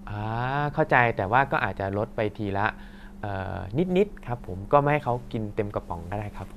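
No technical faults can be heard anywhere in this speech recording. Nothing in the signal path stands out as a problem at any point.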